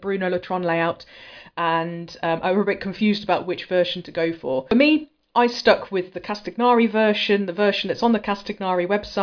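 No dropouts, clicks, distortion or other technical faults can be heard anywhere in the recording.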